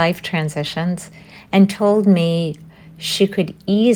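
Nothing stood out on listening to this speech recording.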